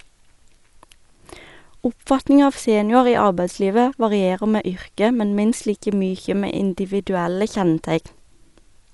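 Speech with plainly audible codec damage throughout: nothing above 11.4 kHz, and a rough, fluttering noise clings to tonal parts, likely Dolby Digital compression at a rate that fits 64 kbps. That dither-like noise filling the starved frequency lines separates it from a simple low-pass filter.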